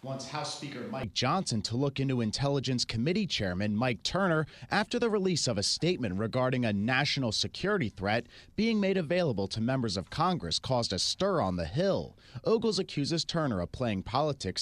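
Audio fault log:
0.00–1.04 s, switch to a distant microphone: already under way at the start, the speech is roomy and hollow, thinner in the bass, about 10 dB lower, with room noise around 30 dB below it. Everything snaps back together at 1.04 s, likely a far microphone standing in, unlike a gradual fade or an added filter.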